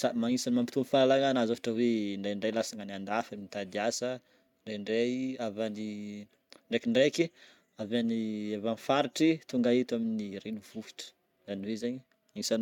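No technical faults can be heard anywhere in the speech.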